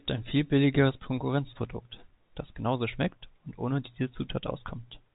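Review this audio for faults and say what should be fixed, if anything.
Nothing stood out on listening to this speech, so there is nothing here that needs fixing.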